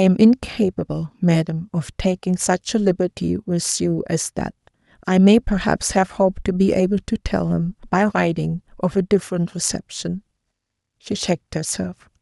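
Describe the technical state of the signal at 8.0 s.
At 8.0 s the speech signal is intact, with no audible technical fault.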